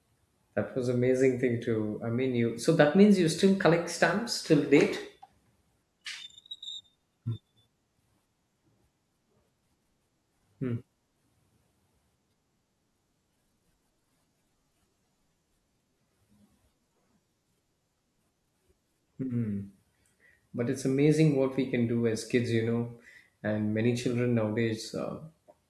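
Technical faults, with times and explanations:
No technical faults can be heard in this speech.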